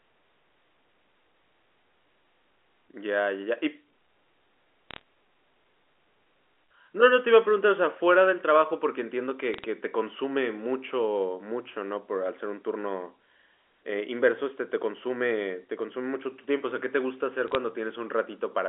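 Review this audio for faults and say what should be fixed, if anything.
Bit errors on a digital phone line corrupted single G.711 samples at 4.91–5.01 s, 9.54–9.64 s and 17.48–17.55 s, producing short bursts of sharp ticking crackle over the speech. Fixing the noisy digital link, or adding error detection with concealment, would stop these flipped bits from reaching the audio.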